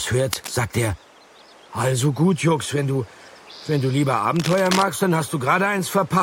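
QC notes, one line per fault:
0.32–0.52 s and 4.36–4.82 s, cable scratch noise: dense, uneven bursts of scratching and rustling sit over the sound, about 10 dB below it in the first burst and about 5 dB below in the louder, longer second one. This is likely a worn cable or connector being moved, its contact resistance jumping rapidly.
4.98 s, lost LE Audio frames: a tiny noisy smear fills the gap for about 7.5 ms, which fits one missing LC3 frame. The decoder filled the gap by reusing the previous spectrum with randomised signs, briefly smearing the sound into noise before normal decoding resumed.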